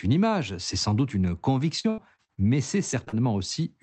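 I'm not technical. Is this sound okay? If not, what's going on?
No. From 1.79 to 2.39 s there is repeated packet loss (robotic sound). Five chunks of the speech went missing and were patched over, making it choppy. Right after "mais c'est", short concealed packet loss causes three brief smears, at 2.91 to 2.95 s, 3.05 to 3.09 s and 3.09 to 3.14 s. Tiny bits of the speech were lost and filled in.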